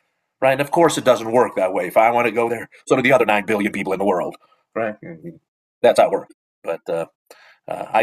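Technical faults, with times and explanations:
2.35–8.03 s, time-stretched section: Speech suddenly runs 1.35 times faster at the same pitch. It sounds rushed. Software likely dropped short pieces to shorten it.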